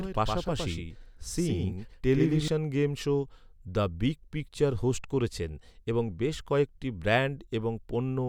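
From the start until 2.48 s, just before "গেম শো", a doubled audio track is heard: a full-band copy trails about a tenth of a second behind, roughly 5 dB quieter, likely from a slower second capture path. Unlike echo, it never decays and stops abruptly.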